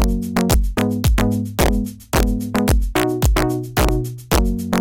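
A sum or gain pushes the signal about 1 dB past the integer limit, causing integer overflow throughout: the few peaks that exceed it wrap to the opposite sign, producing sharp, violent cracks.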